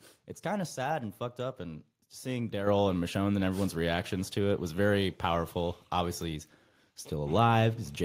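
At 2.67 s the microphone volume stepped up by about 7 dB in one jump, as the input gain was raised automatically. The speech and the background get louder together, and the waveform envelope steps up abruptly.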